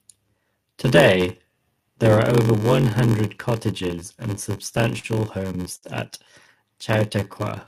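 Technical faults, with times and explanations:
Throughout: block size mismatch (padded), zero-filled gaps in every block buzz at 93.8 Hz, which fits a 512-sample read size, and the speech drags to 0.861 speed.
4.36 to 5.06 s: repeated stalls (stutter), between "one hundred cottages and" and "homes at", four gaps held over by stretched sound, the longest 43 ms, so speech stutters without losing anything.
5.76 to 5.85 s: short stall from a late packet, one sound held 59 ms while a delayed packet caught up, a single drawn-out moment rather than a stuttering run.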